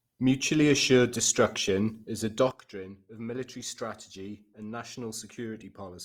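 From the start, the speech sounds grainy and rough rather than swirly as MP3 would, likely Opus compression in music mode at a low rate such as 24 kbps.

At 2.51 s, right after "assured destruction is a", a sudden gain jump drops the level by about 12 dB in one step. Speech and background noise fall together with no ramp, unlike a fade, and stay lower to the end, likely from a gain change applied without smoothing.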